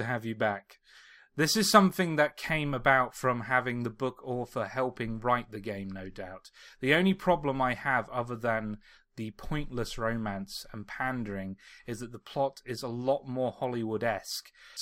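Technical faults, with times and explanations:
No technical fault can be heard in this speech. There is nothing to time or explain.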